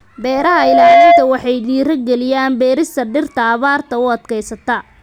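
A single tone near 689 Hz swells over roughly half a second from 0.31 s into a squeal standing about 10 dB above the speech, then stops at 1.33 s, just before "waxay dhiirigeliyaan beerista dhirta". This is loudspeaker feedback squeal: the microphone picked up its own loudspeaker, and loop gain above one at that frequency let it build.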